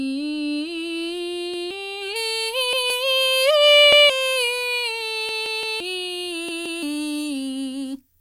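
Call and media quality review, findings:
Repeated buffer: playback underrun, device replayed last block instead of waiting for fresh audio. Music stutters at 1.54–1.71, 2.73–2.90, 3.93–4.10 s (one repeat each), 5.29–5.80 s (three repeats), 6.49–6.83 s (two repeats). Each repeat about 171 ms with a hard join, which fits an 8192-sample buffer. Real material skipped at each event.

Pre-emphasis left on: matching de-emphasis missing after a 75 µs FM-style treble lift, 2.16 s to end. Top end raised about 14 dB at 10 kHz relative to 1 kHz. Music turns thin, glassy, hissy and harsh.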